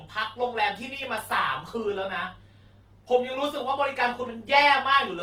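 Speech, and the whole thing carries Opus compression damage that's plainly audible: the voice comes across grainy and rough, with that noisy fill instead of swirl, yet the top still reaches about 20.2 kHz. It's likely a music-mode encode at a low bitrate, around 16 kbps.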